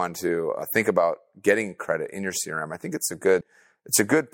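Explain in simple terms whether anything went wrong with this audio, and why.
Yes, the speech has two small gaps from compressed frames skipped, at 0.62 s and 3.41 s. The audio is coded in short chunks of about 32 ms, and a few of these were missing or rejected as damaged, so playback jumps forward. At 0.62 s it loses roughly 70 ms. At 3.41 s it loses around 100 ms.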